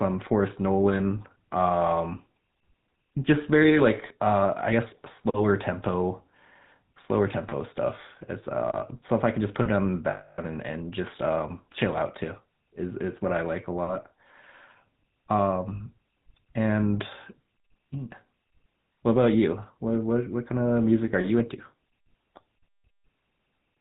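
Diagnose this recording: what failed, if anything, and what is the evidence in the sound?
The speech passes through a GSM full-rate codec. Its buzzy, gravelly roughness and the absence of anything above 4 kHz fit that 13 kbps coder's regularly spaced pulse excitation. A simple band-limit would sound dull and clean, not rough like this.

Lost GSM frames, a network fault, occur at 5.16–5.19 s (20 ms), 10.10–10.39 s (280 ms) and 15.76–15.81 s (40 ms). The codec repeats the last good frame, so each loss leaves a metallic ring, where a dropout would leave a silent gap.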